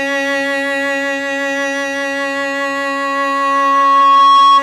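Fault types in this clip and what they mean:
Loudspeaker feedback squeal: the microphone hears the loudspeaker it drives, and at one pitch the loop returns more than it sends, so that pitch feeds itself. In this music a pure tone near 1.1 kHz enters at about 2.01 s and swells over roughly two seconds until it stands about 10 dB above the music, lasting to the end. Its steady single pitch and slow self-sustaining growth set it apart from a brief resonance or ringing filter, which decays instead of building.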